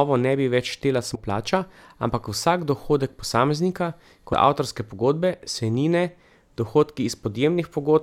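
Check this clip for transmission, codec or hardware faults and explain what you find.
Damaged data in a compressed stream appears twice in the speech. The first runs from 1.14 to 1.16 s, between "ne bi več štela" and "plača ampak vsak dohodek"; the second is at 4.32 s, after "ampak vsak dohodek posameznika". Corrupted frames make the decoder lose sync and hunt for the next header, producing a brief glitch.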